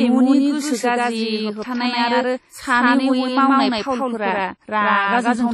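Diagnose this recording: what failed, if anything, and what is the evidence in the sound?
Doubled audio track all the way through: a dry, equally loud copy trails by roughly 150 ms. That's likely a second, slower capture path or an edit keeping two copies.

At the codec stage, there's heavy WMA compression throughout, with washy ringing, signal-breathing hiss and nothing above 13.8 kHz. That's likely a low bitrate, fitting something near 32 kbps.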